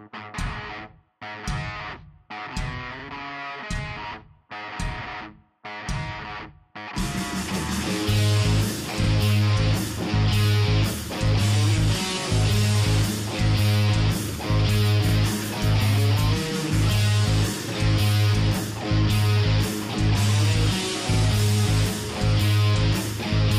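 At 2.99–3.04 s, 9.04–9.09 s, 15.09–15.14 s and 21.14–21.19 s, a stutter marks each join between overlapping chunks. The audio was handled in 6 s blocks, and each block began about 48 ms before the previous one finished, so that slice plays twice. On a waveform, the doubled segment shows a visible discontinuity at each seam. A spectrogram shows a thin vertical broadband line every 6 s, with the preceding 48 ms pattern repeated.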